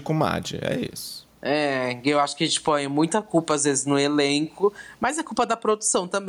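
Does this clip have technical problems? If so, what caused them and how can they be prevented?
Yes, there is gain pumping throughout the clip. The likely cause is input gain set far too high for the microphone, with a fast limiter or compressor clamping the level on every loud moment. Each time the speech peaks, the gain drops. In the pauses the gain recovers, a swing of around 15 dB. Loud and quiet passages end up squeezed together, sounding flat and squashed. To prevent it, lower the input gain so peaks sit well below the limiter's threshold and keep heavy fast limiting off the microphone channel.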